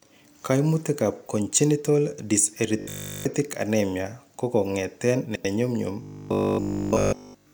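From 2.79 to 3.25 s, just before "anemia kokongeten", new audio likely arrived too seldom, so the player kept looping the last 20 ms in place of essentially all the real sound. The result is robotic sound from repeated short buffers: a rigid, metallic buzz locked at 50 Hz.

At 5.26 to 5.45 s, right after "anemia kokongeten", two neighbouring blocks of about 93 ms each were decoded in swapped order. These frames out of order make the stretch play with its halves exchanged, a garbled flutter, though no time is lost.

From 6.03 to 7.53 s, the same looping of 20 ms likely returns, and the robotic 50 Hz buzz runs to the end of the clip.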